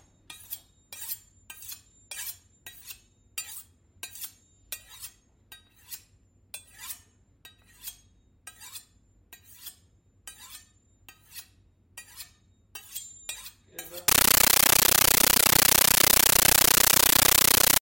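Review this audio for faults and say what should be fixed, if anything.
From 14.08 s to the end at 17.81 s, a compressed stream was played as audio: an AC-3 (Dolby Digital) bitstream reached the output as if it were ordinary samples instead of being decoded. Each encoded frame comes out as a burst of noise about 13.3 ms long followed by silent padding, repeating 31.25 times a second. The density of the bursts fits a 640 kbps stream. Instead of the intended sound, the clip turns into very loud, chattering static. To prevent this, make sure any device receiving AC-3 over S/PDIF or HDMI either decodes it or is set to pass it through only to a decoder, never to a PCM output.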